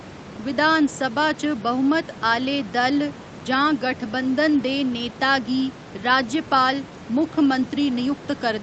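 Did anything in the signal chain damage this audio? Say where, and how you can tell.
No, nothing in the signal chain damaged this audio.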